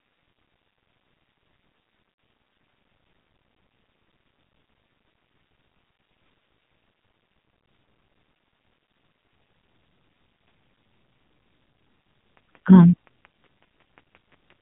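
Right from the start the whole thing carries the AMR narrowband mobile codec sound. Nothing above 4 kHz gets through, so the speech is dull and boxy, and the damage is heavy. There's a buzzy, synthetic edge to the voice because the codec rebuilds it from a crude vocal tract model and a handful of pulses. That points to one of the low AMR-NB modes, around 5.9 kbps, where there just aren't enough bits to keep it natural.

At about 2.12 to 2.18 s you get lost AMR speech frames. That's roughly 60 ms, which fits three 20 ms frames failing their checks. The decoder fills the gap by repeating the last good pitch and vocal tract settings while turning the gain down. So instead of a clean cut, the sound smears for a moment and sags in level. Then it comes back a bit rough before settling again.

From about 12.37 s to 14.51 s there's a train of clicks. It's about fifteen sharp pops at a steady 5.6 per second, all much the same shape and peaking about as loud as the speech itself. 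They tick straight over the voice and through the gaps too, like a metronome that doesn't belong. The likely culprit is interference from nearby equipment or a faulty connection pushing a pulse into the signal on a regular beat.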